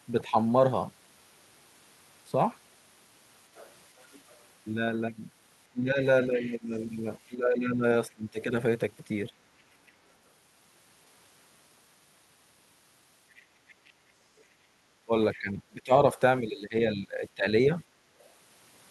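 At 0.29 to 0.35 s the speech briefly dips by about 10 dB. That's likely speech suppressed in double talk, with the echo canceller turning the talker down while the far end speaks. The other side's voice leaks through faintly at 3.55 to 4.32 s, likely loudspeaker echo the canceller didn't fully remove. Suppression returns from 5.71 to 9.33 s, up to about 15 dB deep, and leakage sits underneath from 6.35 to 8.13 s, roughly 20 dB below the talker. The leaking voice turns up again, fainter, at 9.59 to 9.92 s and 13.35 to 15.38 s. Finally the speech ducks from 15.05 to 17.46 s, by as much as about 20 dB.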